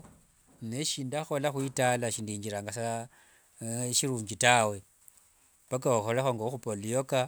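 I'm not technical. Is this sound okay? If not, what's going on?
Yes, this speech recording sounds fine, with nothing going wrong that you'd need to worry about.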